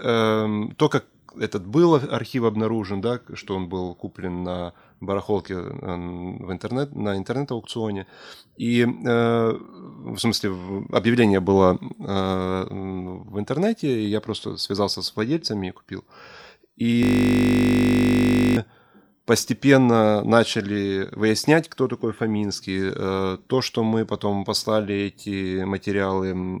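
At 17.03 s the speech stops and a system hang loop takes over until 18.57 s. The playback side stalled while the audio hardware kept replaying the same stretch of its ring buffer, so a single 20 ms slice repeats back to back for about 1.5 s. Because the loop is so short, it fuses into a steady buzz at 50 Hz rather than a stutter, which fits a buffer of about 20 ms.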